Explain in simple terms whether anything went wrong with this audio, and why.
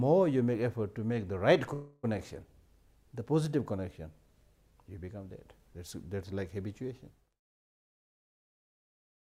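A call audio freeze happens from 1.73 to 2.05 s. For about 0.3 s the sound stalls: the last moment is stretched into a fading buzz or hiss instead of moving forward. The likely cause is that the audio packets were held up in transit, so the receiver's small waiting store ran dry and it filled the pause itself. When the packets arrived, playback resumed where it had stopped, so nothing was lost and everything after runs about 0.3 s late.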